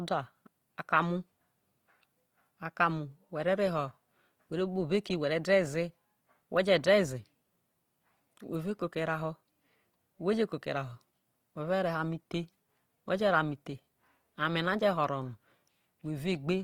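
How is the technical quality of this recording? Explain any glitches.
The recording carries plainly audible codec damage across its whole length, most likely from Opus compression in its music-oriented CELT mode, at what sounds like a low bitrate around 24 kbps. The encoder preserves each band's overall energy but, short of bits, fills detail with folded copies of lower bands or noise, so the speech turns grainy and rough rather than swirly. Unlike MP3, there are few warbling spectral holes, and the full bandwidth survives up to about 20.1 kHz, ruling out the muffled, narrowed speech mode.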